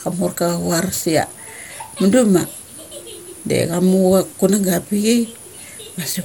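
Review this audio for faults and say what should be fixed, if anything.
Throughout the clip, the speech has most likely been decoded and re-encoded several times, which is generation loss. The sound points to an MP2-type codec at around 96 kbit/s, applied about four times. Each pass quantises again on a shifted frame grid, so the coding noise accumulates. The result is swirly, hollow and smeared, worse than one encode at that rate would give. Consonant attacks are blurred, and nothing remains above 18.8 kHz. To prevent it, keep an uncompressed master and make the lossy encode only once, as the final step.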